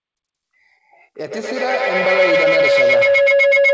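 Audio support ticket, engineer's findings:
Feedback howl from 1.18 s to end of clip. Tonal ring near 500 Hz. Peaks about 8 dB above the speech. Repeats roughly every tenth of a second. Cause: two devices sharing one room on the same call. Mic-to-speaker loop gains on each pass. Repeats grow, narrow to the loop's favoured band. Not broken before clip ends. Band stops at 8 kHz, consistent with a G.722 call path.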